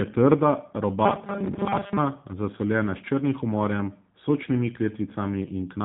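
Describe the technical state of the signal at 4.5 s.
At 4.5 s, as throughout the clip, the speech has passed through a G.729 codec, the kind of damage that fits an 8 kbit/s VoIP link. It rebuilds the speech from a vocal tract model, pitch prediction and a few pulses per frame, so nothing above 3.8 kHz survives, and the voice sounds plainly rough and synthetic.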